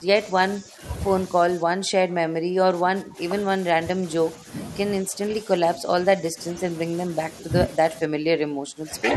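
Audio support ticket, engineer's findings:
Speech suppressed in double talk. Speech level dips and breaks up in patches at 0.0–0.81 s, 1.44–3.19 s, 3.74–4.04 s, 5.02–5.89 s, 6.21–6.38 s and 8.07–9.16 s. Worst around 1.44–3.19 s and from 8.07 s, roughly 20 dB down; the 5.02 s stretch only mildly dipped. Likely the echo canceller's suppressor treating near-end speech as loudspeaker echo while the far end talks, and attenuating both.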